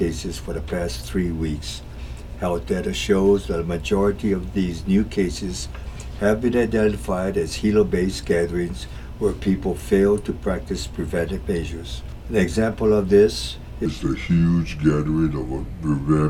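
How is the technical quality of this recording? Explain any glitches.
The recording has one clear fault: a section at the wrong speed at the very end. From 13.86 s until the clip stops at 16.30 s, playback runs at 0.77 times the original rate, most likely because that stretch was clocked or resampled at the wrong rate in editing or playback. Because speed and pitch are tied together, the sound abruptly drags and drops by roughly five semitones, turning deeper and more sluggish until it ends.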